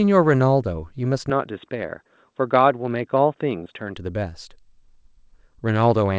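At 1.30 s the speech suddenly turns dull and boxy. Nothing reaches above 3.8 kHz, well short of the 8 kHz the G.722 call path carries elsewhere in the clip. There is no gap at the change, and the loudness stays about the same. A faint new background noise appears, roughly 55 dB below the speech. The likely cause is an input switched to a poorer device, one with a narrower band. Full clarity returns at 3.97 s.

Inside that dull stretch, from 3.64 to 3.67 s, there is a short concealed packet loss. About 20 ms of audio never arrived in time. The receiver covered the hole with roughly 16 ms of sound extended from what came just before, then blended back into the real signal. It is heard as a brief smear or wobble in the speech.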